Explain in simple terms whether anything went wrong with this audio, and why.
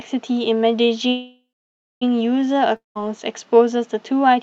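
Two things went wrong. From 1.09 to 2.03 s there is a call audio freeze: the last sound trails off into a fading buzz, then over half a second of silence, before the speech resumes exactly where it stopped. It was likely held-up packets, and nothing is lost, only delayed.

From 2.76 to 2.97 s there is a long network dropout. It begins with the same fading buzz and brief silence, but here about 0.2 s of speech likely never arrives. That skipped stretch, rather than a pause, is what separates it from the freeze.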